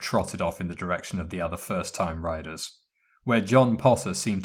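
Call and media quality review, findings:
Lost packet rebuilt from error correction: brief rough, noisier patches at 0.49–0.51 s before "in the direction of" and 2.63–2.69 s after "the other first time". Opus in-band FEC plays a low-bitrate copy carried in the next packet, so unlike plain concealment there's no gap or smeared fill. Durations fit one and two lost 20 ms packets.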